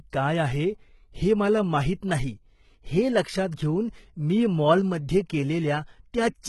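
Throughout, s sounds are gritty and lispy, with treble that is synthetic and gone above 11.8 kHz: likely heavy HE-AAC compression, copying lower bands upward.

At 3.51 s a brief hiss blurs an attack. This is pre-echo: the codec's block noise spilled into the quiet 12 ms before the onset.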